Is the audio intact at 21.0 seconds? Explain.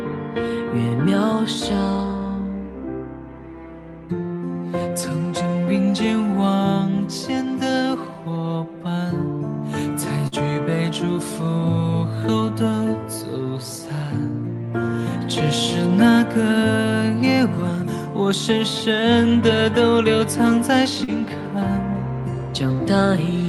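No. Short concealed packet loss occurs from 21.04 to 21.11 s. About 40 ms of audio missed the decoder, which bridged the gap by extending the preceding sound for roughly 37 ms before blending back, leaving a brief smear or wobble.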